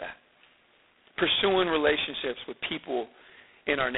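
G.726 ADPCM coding runs through the whole of this speech clip, from start to finish. Each sample carries only a small coded difference from an adaptive prediction, and the heavy, rasping hiss that rises and falls with the speech level fits the coarse 16 kbit/s rate. The sound sits in a telephone band of roughly 250 Hz to 3.6 kHz, with nothing above 3.8 kHz.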